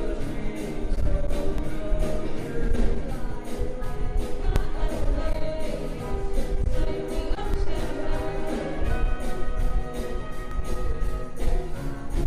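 Audio missing between chunks at 1.58, 4.56, 7.54 and 10.51 s: the sound jumps forward by roughly 20 ms each time, spliced with no silence. The 3-second spacing points to a recorder likely dropping a sliver while closing one chunk and opening the next.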